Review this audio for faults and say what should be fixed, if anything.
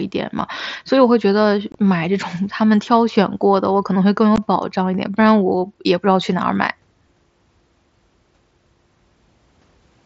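Unconcealed Bluetooth headset packet loss cuts two holes: 1.72 to 1.75 s and 4.36 s. The gaps last 22.5 and 15 ms, fitting lost 7.5 ms mSBC frames. Silence or an idle pattern replaced them, leaving abrupt edges. Enable packet loss concealment and keep the headset close to the phone.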